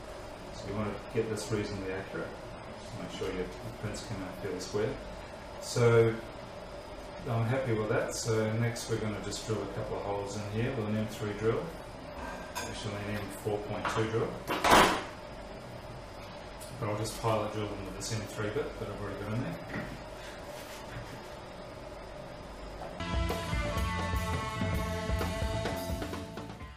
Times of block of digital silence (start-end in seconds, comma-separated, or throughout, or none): none